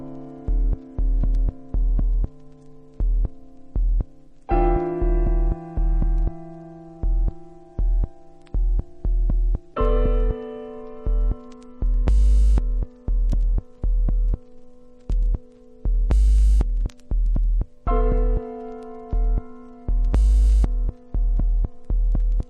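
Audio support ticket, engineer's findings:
No audible faults found.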